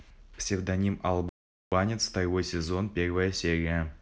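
A speech clip with one playback stall. At 1.29 s the sound stops mid-flow and the output goes fully silent. It returns at 1.72 s, after a gap of about 430 ms. That is long enough to hear as a hard break, not a click or dropout. The silence points to the player running short of data or its audio thread being blocked. The likely cause is a starved buffer that took a moment to refill.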